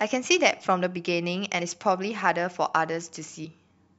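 Compressed frames skipped at 1.6 s and again at 3.44 to 3.46 s: whole frames of the coded speech never reach the output, so it jumps ahead by about 50 ms, then about 150 ms, consistent with dropping two and seven frames of 23.2 ms.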